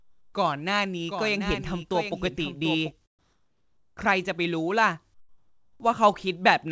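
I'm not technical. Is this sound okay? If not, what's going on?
No, there are two problems. First, comfort noise in place of the background: from 0 to 0.34 s, 3.19 to 3.97 s and 5.14 to 5.80 s, the real room sound drops out and a flat, quieter hiss takes over. The likely cause is the call system pausing transmission during silences and filling the gap with artificial noise.

Second, a doubled audio track: between 1.08 and 2.92 s, a second, quieter copy of the speech trails about 0.7 s behind, switching on and off abruptly. This is likely from the audio being captured twice, once through a slower route.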